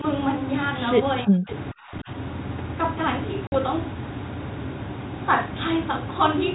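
From 1.24 to 1.49 s the speech dips sharply, by as much as about 40 dB. It's likely speech suppressed in double talk, with the echo canceller ducking the talker while the far side spoke. Right at the tail, 1.48 to 1.52 s, a faint echo leak slips through, about 20 dB down and delayed by 456 ms, probably loudspeaker pickup the canceller didn't fully remove. The same double-talk suppression hits again from 1.72 to 2.1 s, pulling the speech down by up to about 30 dB. At 3.47 to 3.55 s there's packet loss on the ADPCM call: a hard-edged 50 ms hole, which points to several lost packets, then a brief, slightly rough restart while the decoder resyncs.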